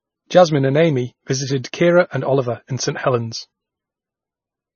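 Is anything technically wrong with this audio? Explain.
Yes. Throughout the speech, the top end is missing, with nothing above 6.6 kHz, and the remaining sound is heavily watery and swirly. This is likely MP3 compression at a very low bitrate, around 20 kbps. With so few bits, the encoder removes everything above a fixed cutoff and discards weaker frequency components, which then drop in and out from frame to frame. That flickering produces the swirl, along with metallic chirps on s sounds and smeared onsets.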